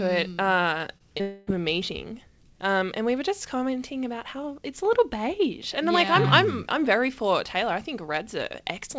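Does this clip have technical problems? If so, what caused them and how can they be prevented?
Yes. Short concealed packet loss occurs twice in this speech, at 0.98 to 1.02 s and at 1.18 to 1.21 s, both shortly after "it hmm uh". Each time about 20 ms of audio failed to reach the decoder, and the receiver patched the gap by extending the preceding sound for roughly 15 to 19 ms before blending back, leaving a brief smear or wobble. The sound carries nothing above 8 kHz, consistent with a wideband call codec such as G.722 at 64 kbps. Prevention: use forward error correction or redundant packets and a slightly deeper jitter buffer.

A long network dropout follows straight away, from 1.21 to 1.49 s, just before "of a meeting". About 260 ms of audio never arrived, most likely because of a network interruption. The receiver filled roughly a quarter of a second by continuing the last sound as a fading buzz or hiss rather than going silent, and the lost stretch is never recovered. 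Prevention: stabilise the connection by preferring wired over congested wireless links and prioritising call traffic.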